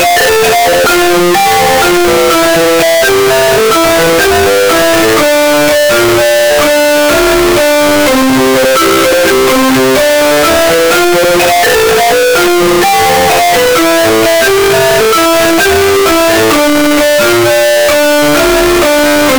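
Throughout all 19 seconds the audio shows a float read as integer fault: every sample sits at an almost fixed, high level as a harsh, nearly square wave, with background noise as loud as everything else. The likely cause is 32-bit float data read as 32-bit integers. Unlike ordinary clipping, the loudness does not follow the original level.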